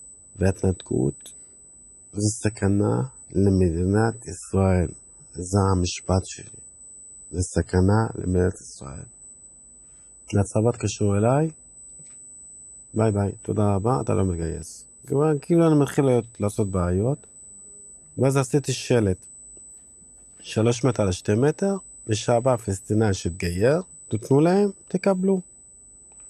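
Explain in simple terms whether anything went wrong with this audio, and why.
Two things went wrong. First, USB whine: the USB connection draws power in tiny bursts 8,000 times a second, and that rhythm leaks into the audio through the shared power or ground. It leaves a steady, thin, high-pitched tone at 8 kHz underneath the sound for the whole clip.

Second, the adaptive stream dropped to a lower bitrate. From 1.59 s to 13.59 s the connection slowed, so the player switched to a lower-quality version of the stream. For those twelve seconds nothing above about 11.3 kHz comes through, so the sound turns duller, with more compression artefacts. The quality then jumps back up without any gap.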